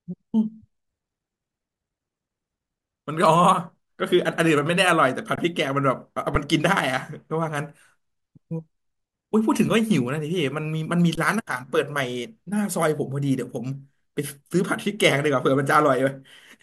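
The playback buffer ran dry three times, causing an underrun with held sample: at 5.36 to 5.38 s, at 6.35 s, and at 11.15 to 11.17 s. Each time, the converter froze on its last value. The speech briefly flattens into a still level for about 21 ms, 6 ms and 21 ms, which fits a 1024-sample buffer for the longer two. Because nothing was lost, playback picks up where it stopped, with only a soft edge.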